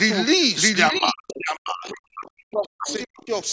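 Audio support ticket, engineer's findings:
Doubled audio track, whole clip. A second full-band copy sits roughly 0.7 s behind, at about the same level. No decay or room colour on it. Likely cause: a slower second capture path or two misaligned copies left in an edit.

Speech suppressed in double talk, 0.91 to 3.34 s. Talker's level dips and cuts out in pieces, about 2 s affected in total, deepest drops around 40 dB. Likely the echo canceller clamping both sides while the far end talks.

Other side's voice leaking through, 1.29 to 1.38 s, 2.26 to 2.30 s and 2.88 to 2.94 s. Short scraps of a second voice, roughly 15 to 30 dB under the talker. Likely residual loudspeaker echo the canceller missed. Call mic processing audible, with nothing above 8 kHz.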